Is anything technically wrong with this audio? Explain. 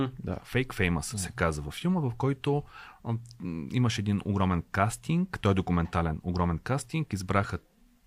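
No, nothing technically wrong stands out here; the speech comes across steady and intact the whole way.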